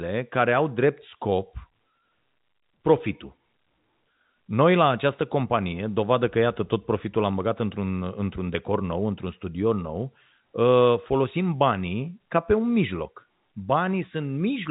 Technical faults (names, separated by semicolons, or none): none